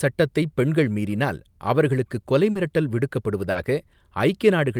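At 2.51 s and 3.51 s, short concealed packet loss: 40 ms of speech never arrived, so the decoder extrapolated the prior sound, leaving a brief smear rather than a silent dropout.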